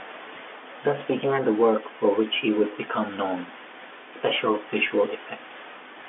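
A brief buzzy hold appears from 4.88 to 4.90 s, where the speech seems to sustain its own tone for a moment instead of moving on. This is packet loss with pitch repetition: about 20 ms of audio went missing, which fits a single lost packet, and the receiver filled the hole by looping the most recent pitch cycle. Because the gap is so short, the loop never fades toward silence, and the speech picks up again almost at once, still within the narrow G.711 telephone band.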